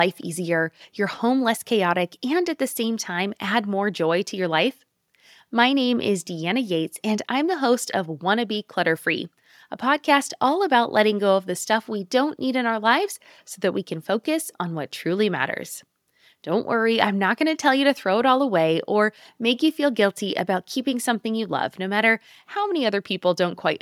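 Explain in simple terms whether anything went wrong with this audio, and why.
Nothing went wrong here: the recording of speech comes through as a steady, continuous signal with no interruptions, distortion or other technical problems to point to.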